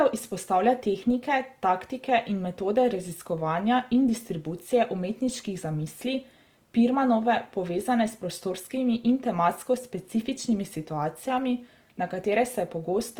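From start to finish, the speech carries a grainy, rough texture, with the upper detail turning noisy rather than clean, though the top end still reaches about 20.2 kHz. That's most likely Opus compression in its music-style mode, and the roughness fits a low bitrate around 24 kbps.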